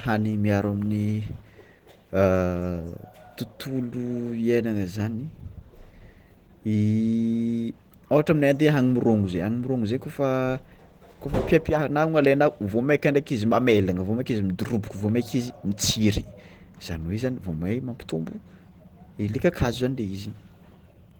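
Opus voice compression affects the whole clip. The band stays open to about 20.1 kHz, so the damage comes from coarse coding, not band narrowing: the speech carries a plainly audible grainy, processed texture, which fits Opus hybrid mode at around 16 kbps.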